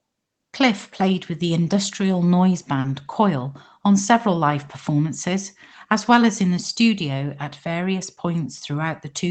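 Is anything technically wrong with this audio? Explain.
Yes. At about 2.80 to 2.85 s, just after "with the industrial noise", there is a brief smear where the sound seems to hang and wobble for a moment before blending back. This is short concealed packet loss: roughly 40 ms of the call arrived too late for the decoder, so the receiver extended the preceding sound to fill the gap and then cross-faded back into the real audio. The audio tops out around 8 kHz, which fits an Opus call path.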